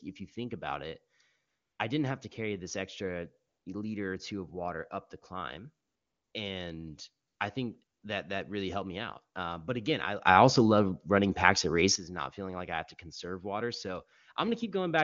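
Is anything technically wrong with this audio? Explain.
Yes. The speech has two faults.

AMR comfort noise appears at 1.47–1.79, 3.47–3.65, 5.85–6.33 (after "water up the climb"), 7.27–7.39 and 7.83–8.03 s (between "I think" and "that that really helped"). In each gap, lasting 120 to 480 ms, speech frames stopped and the receiver generated smooth synthetic noise, so the real background drops out.

A sudden gain jump runs from 10.26 to 11.96 s, between "but again I" and "not feeling like I". Speech and background step up together by about 12 dB with no ramp, then fall back. This is likely a gain setting applied instantly. The AMR wideband (HD Voice) codec itself leaves little audible damage.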